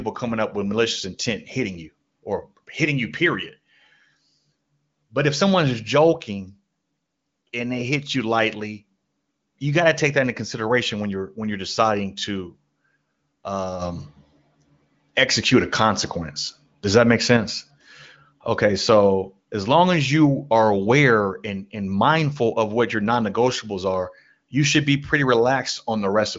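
Nothing stood out on listening to this speech, which carries the sound of the AMR wideband (HD Voice) codec at a high rate, with its top end stopping near 7.6 kHz.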